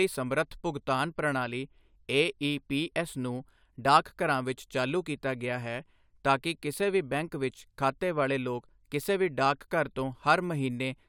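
No technical faults are audible anywhere in the recording.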